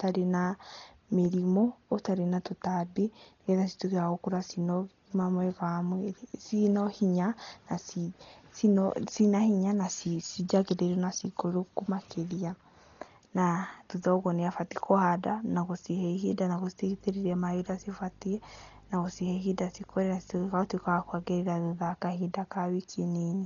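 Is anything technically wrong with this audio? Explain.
Yes, two faults. Throughout, the speech sounds dull and muffled, with nothing above 7 kHz and rough, fluttering noise around tones. This is likely heavy Dolby Digital compression at a very low bitrate, around 32 kbps, where dither noise fills the bands left without mantissa bits. From 16.86 to 21.44 s, a 50 Hz buzz with hash above it and a 15.6 kHz whine sits well below the speech. This is video or display buzz, picked up from a screen or video cable.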